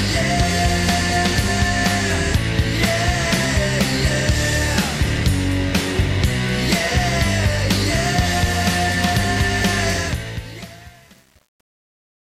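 Truncation distortion on a fade runs from 9.93 s to the end at 12.28 s, over the fade-out that starts around 10 s. The volume stage keeps too few bits and adds no dither, which fits an 8-bit path. As the level falls toward the smallest step, the waveform collapses into coarse square steps. From 10.21 s onward the tail turns gritty instead of thinning out smoothly.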